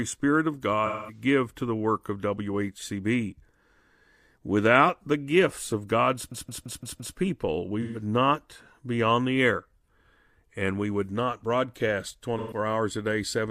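From 0.86 to 1.22 s the speech turns into a smeared, noisy patch just before "to the work of". This is AAC frame loss with concealment. About 213 ms of coded audio, consistent with five AAC frames, failed to arrive, and the decoder filled the hole by reusing the last good spectrum with randomised phase. The result is a hazy texture rather than a clean gap.

At 6.32 s a system hang loop begins and runs to 7.17 s. One 170.67 ms slice of audio plays five times in a row at 5.86 Hz, producing a stuttering, machine-gun repetition. The host stalled while the output hardware kept cycling the same ring buffer, which fits an 8192-sample buffer. Little or no audio appears to be skipped once playback resumes.

The concealment fault returns twice more. From 7.82 to 8.02 s there is a 128 ms smeared patch just before "not be on the". From 12.38 to 12.58 s another 128 ms patch falls between "we would not broadcast" and "hours a day". 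Each is consistent with roughly three lost frames, and both are short enough that the synthesised fill never decays to silence.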